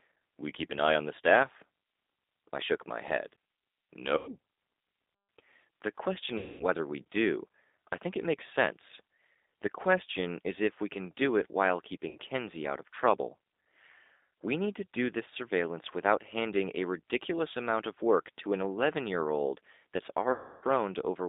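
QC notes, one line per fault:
Throughout: G.729 codec. The speech is carried at 8 kbit/s through a narrow line band of about 250 Hz to 3.7 kHz, so it sounds thin and boxed in, with no low body and no air on top. The decoder rebuilds each frame from a vocal tract filter, a pitch predictor and a few pulses rather than from the waveform itself, which leaves the voice plainly rough and slightly synthetic.
4.17–4.32 s, 6.38–6.66 s, 12.09–12.17 s, 20.32–20.64 s: VoIP packet loss concealed by the speech codec. Four gaps of 100, 220, 60 and 300 ms were filled by the decoder, at 6.38 s between "the question" and "we do I think", at 12.09 s after "can do it while", and at 20.32 s after "year old that's". The decoder repeats its last pitch and filter with falling gain, so each gap turns into a stretched, buzzy tone or coloured noise that fades. Because every frame builds on the previous one, the voice stays weak and smeared briefly after each gap.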